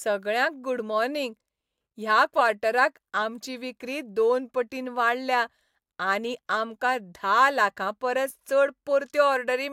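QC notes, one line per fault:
No faults were found in this speech recording. There is nothing to log against any time in it.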